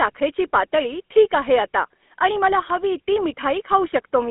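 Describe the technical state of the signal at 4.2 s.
At 4.2 s the speech is still carrying the GSM full-rate codec damage that runs through the whole clip. The codec rebuilds the voice from a vocal-tract model driven by a sparse, regularly spaced pulse excitation, and the result here is a plainly audible buzzy, gravelly roughness, consistent with a 13 kbps full-rate link. A spectrogram shows energy confined to roughly 250 Hz to 3.5 kHz, with nothing above 3.8 kHz.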